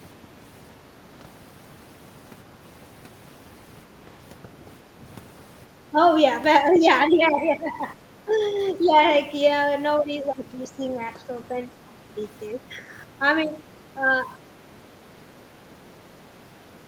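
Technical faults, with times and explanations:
5.90–5.96, 7.08–8.34, 8.87–8.95, 9.99–11.95 and 12.54–14.10 s: speech suppressed in double talk. The speech dips by roughly 5 to 15 dB, likely because the echo canceller turned everything down while both sides talked at once.
6.74–6.79 s: other side's voice leaking through. A brief, faint scrap of a second voice sits roughly 20 dB below the talker, likely loudspeaker echo the canceller failed to remove from the microphone.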